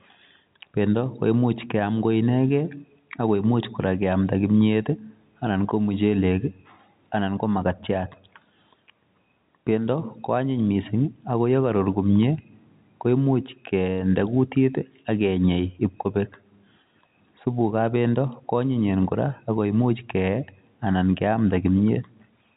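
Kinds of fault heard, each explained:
No faults can be heard in this speech clip. It comes through a working G.711 telephone path, so nothing above about 3.8 kHz reaches the listener, and any coding damage is faint at most.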